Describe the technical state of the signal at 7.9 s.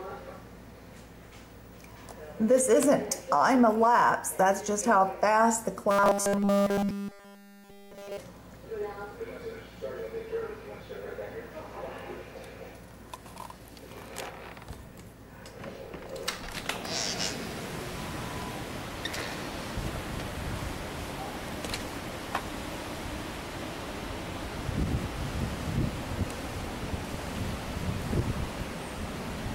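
At 7.9 s the sound is a rigid metallic buzz at 200 Hz, robotic sound from repeated short buffers (5.91 to 8.17 s), likely from starved 5 ms buffers looping nearly continuously. Spectrograms show evenly spaced 200 Hz harmonic lines; waveforms show identical repeating 5 ms cycles.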